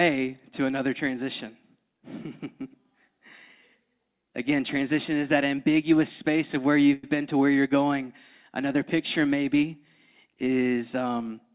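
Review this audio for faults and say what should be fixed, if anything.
A call audio freeze occurs at 6.93 to 7.04 s, between "ambiguous space of where" and "been to where you're". For about 102 ms the last sound is stretched into a fading fill. Speech then resumes where it stopped, with nothing lost, but now 102 ms late. The likely cause is late packets draining the jitter buffer. The band-limited G.711 sound, with nothing above 4 kHz, is simply the call codec. To prevent it, give the jitter buffer more headroom and reduce network delay variation on the call path.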